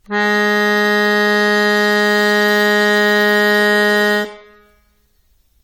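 From start to end the music sounds swirly, hollow and smeared, attacks blurred. Generation loss, likely about seven AAC passes near 96 kbit/s.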